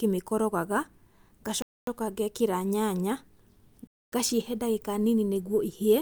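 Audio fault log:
1.62–1.87 s and 3.87–4.12 s, gap between chunks: the speech was handled in blocks that fit a 2-second chunk length, and about 250 ms of silence was left at each join, leaving dead air there. No speech is lost; it halts abruptly and resumes cleanly, so each hole has hard edges on both sides. The second hole ends just before "ngaciĩhe ndagĩka nini", and the two holes fall about 2.25 s apart, matching the chunk length plus the gap.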